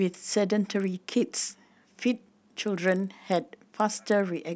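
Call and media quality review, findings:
Resampler restarted on every block: 25 Hz ticks on speech from 0.68 s to end of clip. 48 kHz to 16 kHz converter resetting per 40 ms block, so each block edge filters against missing neighbour samples, giving periodic edge errors.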